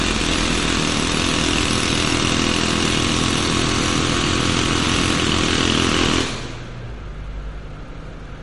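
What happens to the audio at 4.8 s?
At 4.8 s, as throughout the clip, the audio has nothing above 11.2 kHz, with a watery, swirling texture and smeared attacks. This is likely MP3 compression: short of bits, which fits around 48 kbps, the encoder drops the treble and zeroes weak frequency lines frame by frame.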